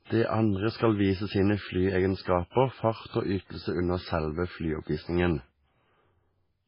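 From start to finish the speech carries heavy MP3 compression artefacts, likely from a very low bitrate, which fits something around 16 kbps. Nothing comes through above 5.3 kHz, so it sounds dull, while weak detail flickers on and off, giving that watery, swirly texture and smeared attacks.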